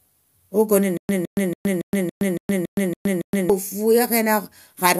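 A speech recording with a stutter with silent gaps from 0.97 s to 3.50 s. A 163 ms fragment repeats nine times, each followed by about 118 ms of dead digital silence, at a steady 280 ms cycle. This likely comes from a playback or stream stall where each retry replays the last buffered chunk and then runs dry. Ordinary dropouts would resume with new material after each gap. Here the same burst keeps returning, and the speech from that span never arrives.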